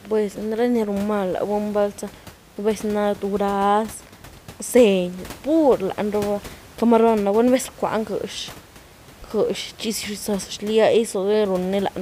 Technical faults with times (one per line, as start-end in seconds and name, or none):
none